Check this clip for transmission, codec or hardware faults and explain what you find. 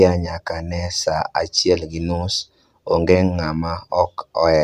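Nothing stood out on listening to the speech in this clip.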